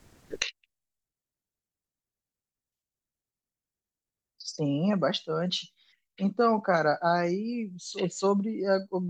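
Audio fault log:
0.42–9.1 s: one channel inverted. The speech drops by about 36 dB to a faint residue, likely because one channel's reversed polarity cancels the other when summed to mono.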